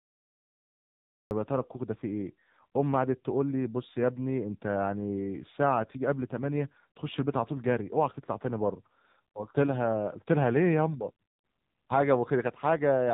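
The recording or stream began late, a cut-off start: from 0 to 1.31 s there is only digital silence, and at 1.31 s the speech appears abruptly, already mid-sound. Because capture started partway through an utterance, there is no natural attack or fade-in. The first sound snaps on abruptly, as if chopped off at the front edge, and the onset lacks the soft build-up a spoken sound normally has.

Throughout the clip the speech has passed through the AMR narrowband mobile codec, heavily damaged. AMR-NB rebuilds the voice from a simplified vocal-tract model excited by a few pulses in each subframe, and here the bit budget is low, fitting a rate around 6.7 kbps. Nothing above about 3.8 kHz survives, so the sound is muffled and telephone-thin, lacking sibilant crispness. The sparse excitation makes the voice buzzy and synthetic, with a coarse, processed edge.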